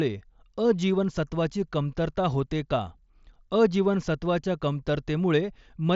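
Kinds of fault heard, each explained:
Nothing here counts as a fault: the speech simply comes over a Bluetooth mSBC headset link, so the top end stops around 7.7 kHz and there's a light bit of codec grain that comes with that path.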